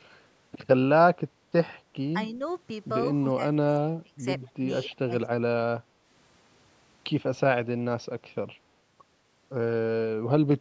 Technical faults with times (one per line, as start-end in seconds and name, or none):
1.81-1.95 background gated by the echo canceller
3.22-4.19 speech suppressed in double talk
4.40-4.50 echo leak
4.54-5.12 speech suppressed in double talk